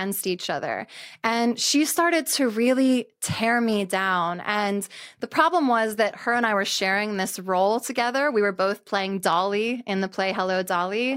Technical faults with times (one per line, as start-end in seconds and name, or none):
none